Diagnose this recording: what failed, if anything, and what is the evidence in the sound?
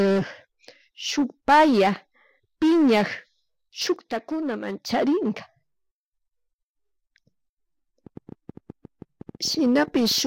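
A sudden gain jump runs from 3.96 to 4.90 s, where the speech and background noise drop together by about 6 dB and then come back. A step that size most likely comes from a digital gain stage or one-bit shift applied without a ramp.

A train of clicks runs from 8.07 to 10.19 s: around twenty similar pulses at about 10.4 per second, irregularly spaced, roughly as loud as the speech. They point to the analogue wiring, likely interference from nearby equipment or a faulty connection or power supply.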